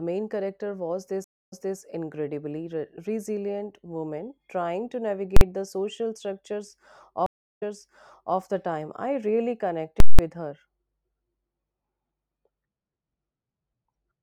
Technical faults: stream reconnect; invalid numbers at full scale

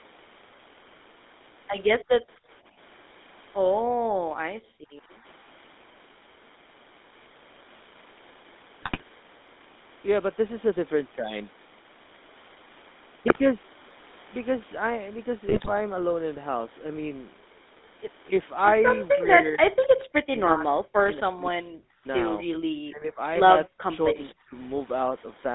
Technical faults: GSM full-rate codec; background gated by the echo canceller; GSM bit errors; speech suppressed in double talk

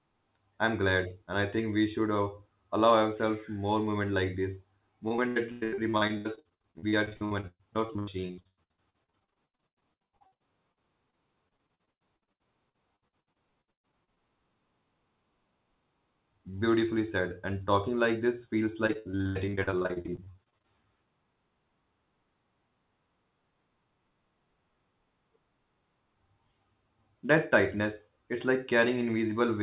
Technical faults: repeated packet loss (robotic sound)

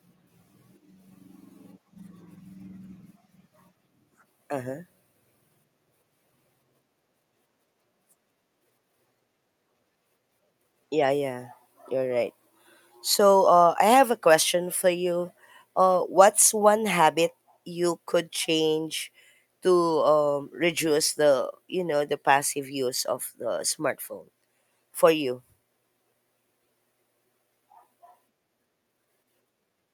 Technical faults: none

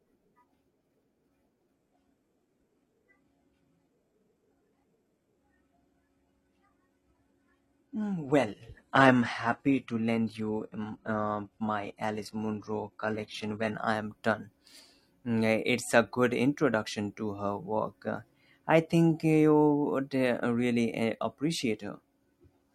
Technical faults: adaptive stream at a lower bitrate

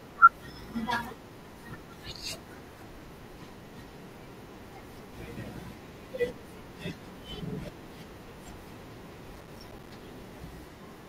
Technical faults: processor overload crackle

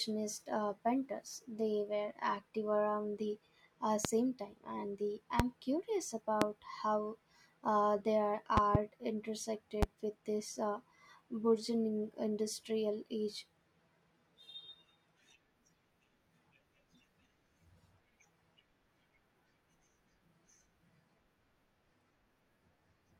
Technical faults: loud pop

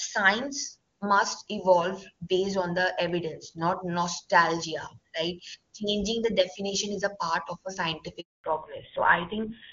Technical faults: handover gap; fallback to narrowband

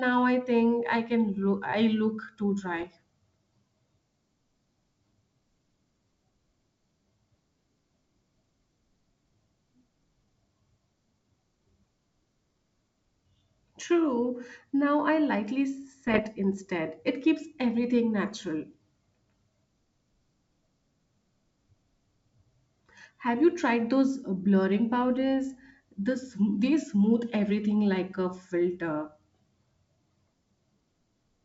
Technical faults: bit errors on an ADPCM link

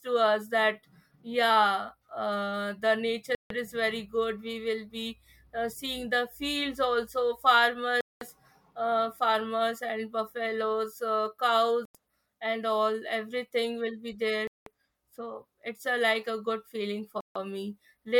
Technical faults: Bluetooth stall

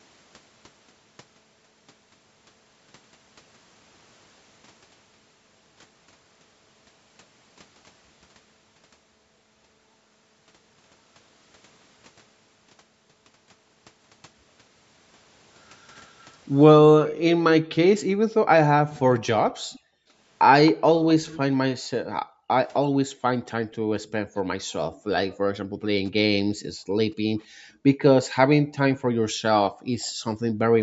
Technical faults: echo leak; background gated by the echo canceller

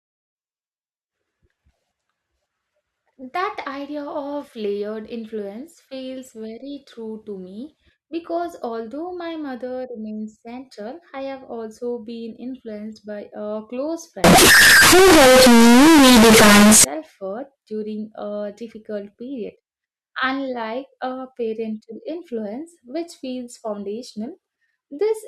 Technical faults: float read as integer

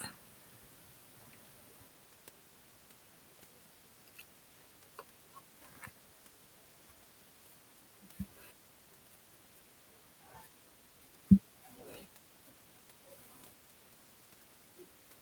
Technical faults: none

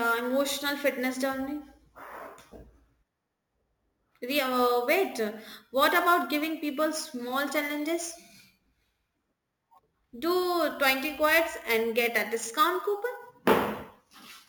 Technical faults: imaging from sample-and-hold upsampling

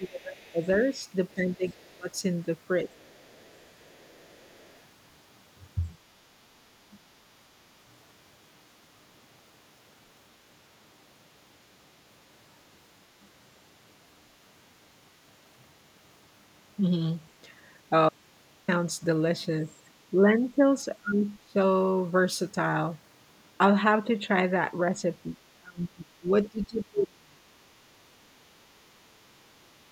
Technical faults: speech suppressed in double talk; other side's voice leaking through; audio dropout to a faint residue

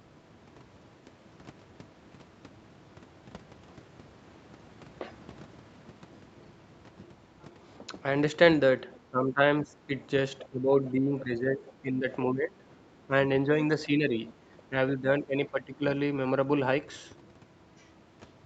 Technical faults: speech suppressed in double talk; other side's voice leaking through

